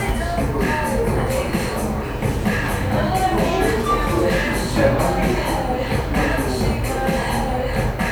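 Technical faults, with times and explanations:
Nothing technical stands out here; this recording of sounds comes through without any audible glitches worth flagging.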